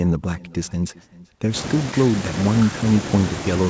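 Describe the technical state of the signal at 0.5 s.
At 0.5 s the far end is playing the call through a loudspeaker, its microphone is catching that playback, and no echo canceller removes it, so this is echo with no canceller, present for the whole clip. The speech returns after roughly 400 ms, about 22 dB below the direct sound. The result is a faint, thin shadow trailing each phrase. Like the main signal, it stops at 8 kHz, which fits a wideband G.722 call path.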